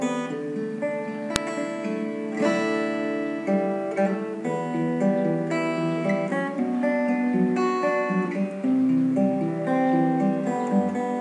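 At 1.36 s there is a single sharp, loud click, the signature of a file header played as audio. A WAV header was left in place where pieces of audio were joined or streamed, so its bytes were decoded as samples, producing a brief snap regardless of the surrounding signal.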